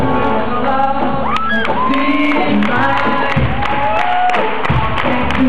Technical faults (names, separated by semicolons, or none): none